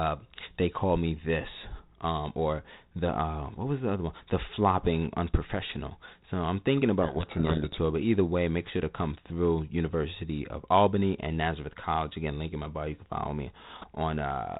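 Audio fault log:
7.02–7.78 s, codec payload misread: right after "I'm thinking", the speech is buried under harsh, grinding distortion until "but either way make" returns. The G.726 code words are being unpacked with their bits in reversed order, so each sample's difference value is wrong and the adaptive predictor drifts. On a spectrogram the harmonic striations dissolve into dense rough energy filling the band up to the 4 kHz ceiling; the waveform turns jagged and spiky there, while the surrounding light coding noise fits 32 kbit/s G.726.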